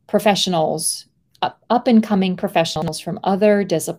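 Right after "professionals up and coming", from about 2.76 to 2.88 s, there's a brief chunks-out-of-order fault. A 60 ms piece of the speech shows up one chunk late, so two slices swap places and play back jumbled, with three hard joins.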